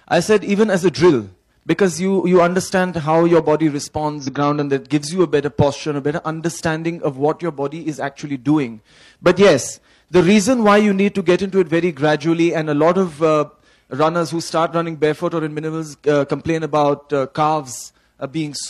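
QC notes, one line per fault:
4.18–4.28 s, damaged data in a compressed stream: a short glitch where the decoder misreads bad frames, loses sync and skips ahead to the next header.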